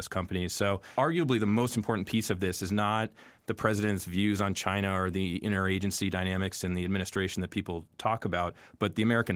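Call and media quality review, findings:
No findings in this call and media quality review; the speech comes through Opus voice compression at 20 kbps as expected.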